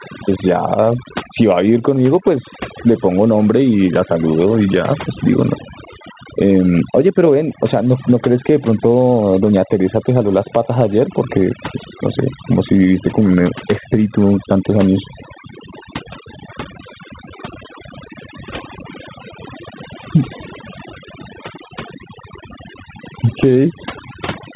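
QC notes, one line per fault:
throughout, overdone noise removal: an over-aggressive noise reducer mutes bands near its noise estimate, taking quiet parts of the voice with them and leaving a lowered background broken into twinkling specks.
throughout, gain pumping: likely excessive mic gain pushing a fast limiter, which pulls the gain down by roughly 10 dB on loud syllables, squashing dynamics.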